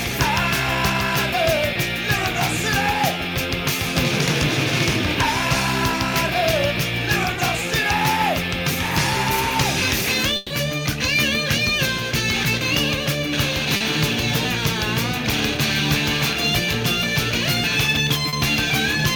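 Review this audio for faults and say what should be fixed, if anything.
Short concealed packet loss at 1.73–1.77 s, 13.77–13.83 s and 18.29–18.35 s: 20 to 40 ms never arrived, so the decoder extended the preceding sound, leaving brief smears.

Burst of packet loss at 10.37–10.53 s: about 140 ms went missing in a row, and the receiver stretched and faded the last sound before the audio jumped ahead.

To prevent both, reduce network loss and jitter by using a steadier connection, a larger jitter buffer, or forward error correction.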